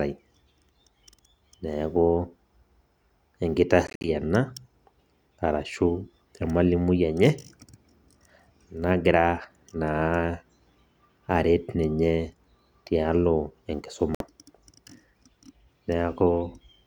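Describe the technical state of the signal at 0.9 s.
At 0.9 s the speech signal is intact, with no audible fault at that moment.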